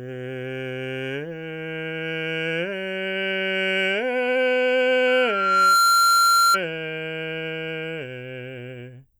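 Loudspeaker feedback squeal runs from 5.07 to 6.59 s in this music. A single tone at 1.4 kHz rises out of the music. It swells over roughly the first three-quarters of a second and then holds at around 10 dB above the music before it cuts off. A microphone was picking up the loudspeaker it was feeding. At 1.4 kHz the loop gain went past unity, so that frequency kept feeding itself and building up.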